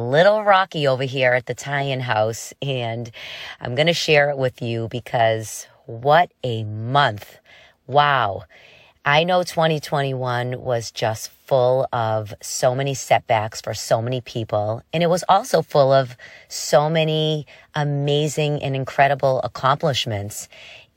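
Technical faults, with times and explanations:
Nothing stood out on listening to this speech recording.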